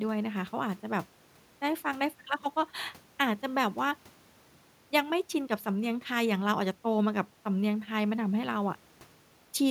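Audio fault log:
No faults heard.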